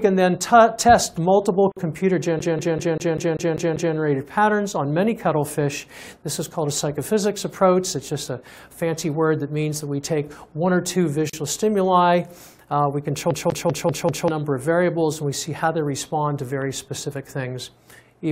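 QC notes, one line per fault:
1.72–1.77 s, gap at a join of encoded pieces: a 51 ms break in continuous sound where separately encoded segments were butted together, leaving encoder delay and end padding in place.
2.39–3.96 s, CD stuck on one turn: a 195 ms section repeats 8 times with a short mute at each jump, the laser skipping back at a scratch.
11.30–11.33 s, gap at a join of encoded pieces: a 37 ms break at a segment join; untrimmed leading silence and final-frame padding open a hole before the sound resumes.
13.31–14.28 s, CD stuck on one turn: the same 195 ms loop length recurs, repeating 5 times with muted jumps, giving the fast, even stutter of a skipping disc.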